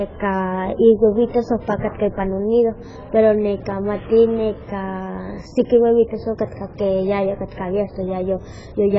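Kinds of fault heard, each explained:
AAC compression: The speech sounds dull and smeared throughout, with a warbling, fizzy edge on sustained sounds and sibilants. Nothing is heard above 7.6 kHz. The likely cause is heavy AAC-LC coding at a very low rate, one that fits about 12 kbps and starves the spectrum of detail.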